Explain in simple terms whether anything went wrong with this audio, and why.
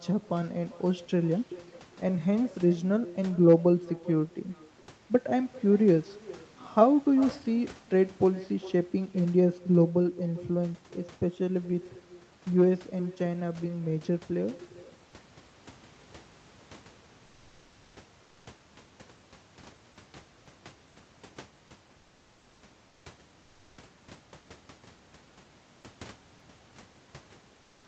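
The speech has an echo with no canceller: the talker's voice comes back faintly under half a second later, because the far end's loudspeaker feeds into its microphone. There's also comfort noise in place of the background at 18.23–18.45 s, 22.89–23.05 s and 27.61–27.83 s, where the room sound briefly turns flat and smooth, likely from the sender going quiet between phrases.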